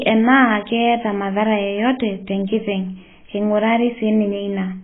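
Throughout, the speech sounds dull and smeared, likely from heavy AAC compression at a very low bitrate; a spectrogram shows nothing above 3.7 kHz.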